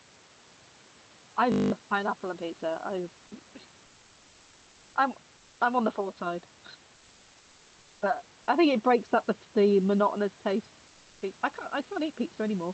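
A steady 50 Hz buzz replaces the speech from 1.52 to 1.72 s. This is a system hang loop: a 20 ms slice of audio repeats exactly ten times while the machine or its audio driver is frozen, and the sound hardware keeps cycling through the same ring buffer. The 20 ms loop length points to a buffer of that size, and about a fifth of a second of real audio is lost. Later, the room's background hiss, about 29 dB below the speech, turns flat and featureless and drops by about 1 dB, from 5.37 to 5.59 s and again from 10.87 to 11.21 s. This is comfort noise in place of the background. The likely cause is discontinuous transmission in the Opus call codec: during these pauses the sender stops sending real audio, and the receiver fills the gap with synthetic noise shaped roughly like the room.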